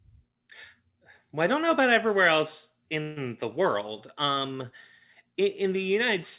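Right after "know about everywhere else", at 3.02 s, there's a call audio freeze: the last sound gets stretched into a fading buzz or hiss for about 144 ms until 3.18 s, likely packets held up and the jitter buffer running dry. Then "the world" picks up intact, just late, over a narrowband line with nothing above 4 kHz.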